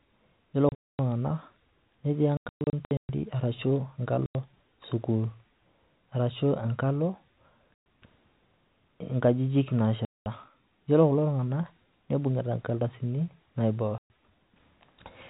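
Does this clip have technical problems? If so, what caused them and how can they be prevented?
Yes. Packet loss filled with silence hits at 0.69–0.99, 2.37–3.09, 4.26–4.35, 7.80–7.85, 10.05–10.26 and 13.98–14.09 s. Missing packets were replaced by silence, leaving hard-edged holes whose lengths fit 30 ms packets, over a narrowband G.711 telephone signal. Prevent it with forward error correction and with concealment that rebuilds missing audio instead of muting it.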